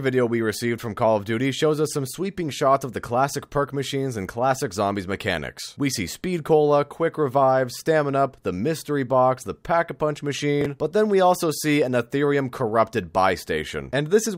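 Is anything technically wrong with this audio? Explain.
Yes. Around 10.61 to 10.66 s, chunks play out of order: one roughly 10.7 ms chunk arrives three chunks late, giving a brief jumbled moment. Unlike a dropout, no audio goes missing.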